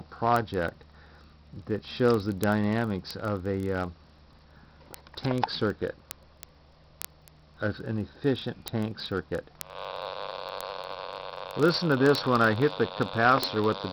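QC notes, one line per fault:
0.10–13.90 s, word clock ticks. A tick lands roughly every 30 ms, some 500 in all. The receiving device runs on its own clock, not locked to the sender's, and the two drift apart by around 700 ppm. Each slip drops or repeats one sample, which clicks.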